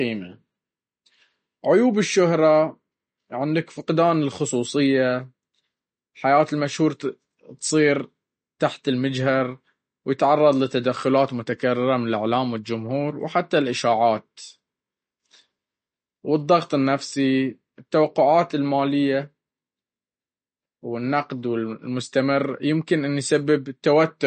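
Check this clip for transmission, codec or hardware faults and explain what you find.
One codec fault runs through the whole clip: likely MP3 compression at a low bitrate, consistent with something near 40 kbps. Short of bits, the encoder cuts off everything above 8.6 kHz and drops weak frequency lines frame by frame, so the speech sounds dull, watery and swirly, with metallic chirps on s sounds.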